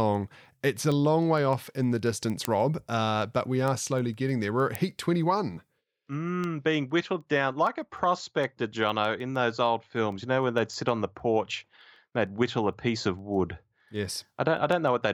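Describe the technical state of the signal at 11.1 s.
At 11.1 s the speech carries word clock ticks, present from 0.15 s to 15.03 s: an unlocked receiver clock, off by around 150 ppm, drops or repeats one sample roughly every 0.15 s, giving sharp, uneven ticks. A spectrogram shows thin, evenly spaced vertical broadband lines, and the waveform shows single-sample jumps.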